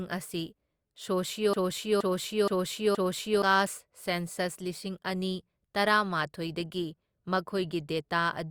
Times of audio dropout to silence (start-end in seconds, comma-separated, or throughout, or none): none